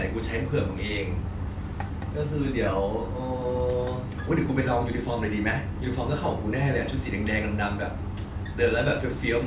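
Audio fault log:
No faults heard anywhere in the speech.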